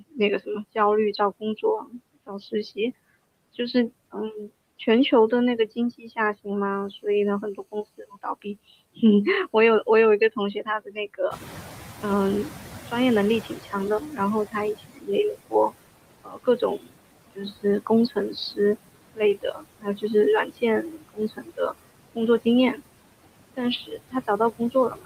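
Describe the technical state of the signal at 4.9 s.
At 4.9 s the signal shows noise suppressor artifacts, present across the whole clip rather than at this moment alone. The suppressor estimates which frequency bands hold steady background noise and pulls them down frame by frame, here by about 17 dB. Between phrases the background drops away, then returns beneath the speech as the bands reopen.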